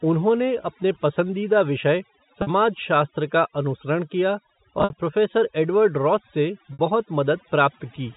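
Across the whole recording the background drops and breaks up, flecked with twinkling specks. That is overdone noise removal: a noise reducer set too hard pulls individual frequency bands down whenever they sit near its noise estimate, taking quiet parts of the voice with them.

At 0.63 s there is a brief, slightly held buzz, about 10 ms of lost audio bridged by repeating the last pitch period, which is packet loss with pitch repetition. From 2.42 to 2.47 s a 50 ms gap is held and faded over the same span. Between 4.79 and 4.93 s about 90 ms goes missing in scattered pieces across 140 ms, the longest run near 60 ms, so the buzz fades toward silence before speech cross-fades back. From 6.73 to 6.79 s a 60 ms loss does the same. The concealment repeats the final cycle and fades it out, so short gaps buzz and longer ones dip away. The losses fit 10 ms packets. Through all of this the G.711 telephone coding is heard as a band cut off at 4 kHz.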